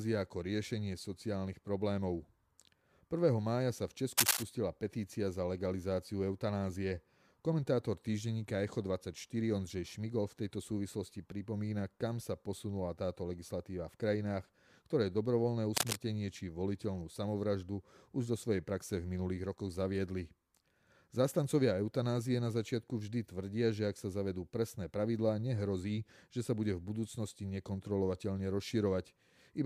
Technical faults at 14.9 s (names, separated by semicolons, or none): none